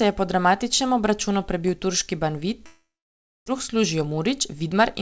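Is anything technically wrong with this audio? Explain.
Yes. From 2.66 to 3.50 s there is a long network dropout: the sound trails off into a fading buzz, then about 0.62 s of near-silence. Likely a stall in packet delivery, with around 0.6 s of audio lost and the playout delay pushed up by roughly a fifth of a second. Above the G.722 call path's 8 kHz ceiling there is nothing to hear.

From 3.68 s to the end, a jitter buffer speed-up follows. To shed the backlog built up during the stall, the receiver repeatedly cuts out pitch-period-length slices, about 150 ms in total. The speech runs about 10% fast at unchanged pitch and sounds hurried.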